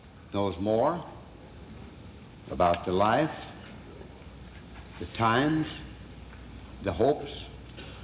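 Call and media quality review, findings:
Skip ahead, 1.70 to 1.79 s: a stretch of queued audio was dropped, around 0.4 s, cutting latency by about that much. Playback jumps forward, the two sides spliced almost directly, with no fill.

Jitter buffer speed-up, 2.28 to 2.58 s: buffer still over target, so the receiver trimmed pitch-period pieces repeatedly, roughly 50 ms in total. Audio runs at 114% speed, same pitch, noticeably hurried, heard through narrowband call coding with nothing above 4 kHz, consistent with G.711 mu-law.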